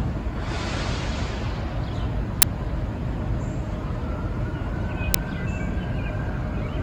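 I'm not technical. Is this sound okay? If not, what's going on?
No. There are two brief loud bursts of harsh digital noise, at 2.42 s and at 5.14 s. Both come from an uninitialised buffer: the playback system sent out a small block of memory before any real audio had been written into it, so whatever leftover data sat there was played as if it were sound. The first burst lasts about 10 ms and the second about 5 ms.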